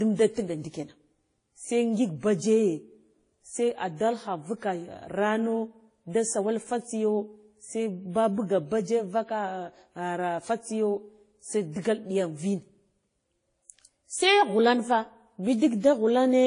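Throughout, the speech stops dead above 10.1 kHz, a flat spectrogram shelf, with layered smearing: likely transcoding between lossy codecs, low-bitrate WMA into Vorbis.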